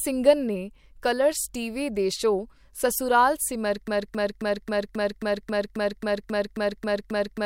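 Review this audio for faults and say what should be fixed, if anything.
Broken-record loop from 3.88 s to the end of the clip: right after "ਦੇ ਸ਼ੋਅ ਸਸੁਰਾਲ ਸਿਮਰ", a 0.27 s fragment of speech repeats exactly, back to back, 13 times, and the speech that should have followed is lost. The likely cause is a stalled player, encoder or stream that kept re-sending the last fragment it held instead of new audio. To prevent it, detect stalls and output silence or end the stream rather than replaying the held buffer.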